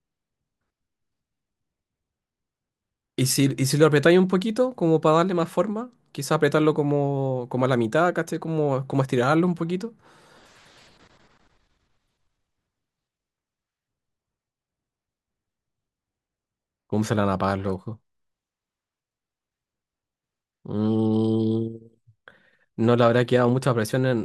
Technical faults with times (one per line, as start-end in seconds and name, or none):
none